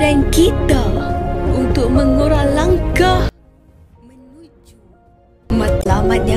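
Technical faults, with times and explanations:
3.29–5.50 s, one channel inverted: the mono sum falls by about 32 dB, leaving only a faint residue. The likely cause is reversed polarity on one stereo channel, cancelling shared content. The waveform shrinks to a thin band and the spectrogram dims.
5.79–5.86 s, damaged data in a compressed stream: a short glitch lasting about 75 ms. Corrupted frames were misdecoded while the decoder lost sync and searched for the next valid header. It appears as a brief, sharply bounded disturbance on the spectrogram.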